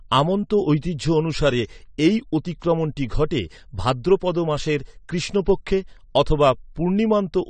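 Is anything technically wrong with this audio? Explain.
Yes. Throughout the speech the sound is dull and smeared, with a warbling, fizzy texture on sustained sounds and sibilants, and nothing above 9 kHz. The likely cause is AAC compression, AAC-LC at a low bitrate, which fits a 32 kbps stream. The encoder quantises each frame's frequency lines against a hearing model, so with too few bits it cuts off the top band and leaves gaps that shimmer from frame to frame.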